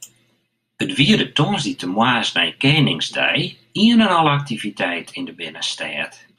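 No technical faults are audible anywhere in this recording.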